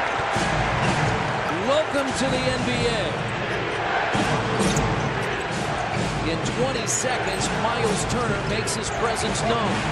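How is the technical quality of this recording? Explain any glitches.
One glitch stands out, at about 1.49 s, and it comes from damaged data in a compressed stream. The event is very brief. Part of the encoded data at that point was corrupted, so the decoder could not read those frames properly, lost its place in the stream and had to find the next valid frame header before playback could continue. What this produces is a short burst that may sound like a chirp, squawk, click or tiny hole. A simple click from a mechanical or electrical source would not behave like this. This burst comes from the decoder rebuilding the sound from bad data, so it follows codec frame boundaries rather than anything in the sound itself.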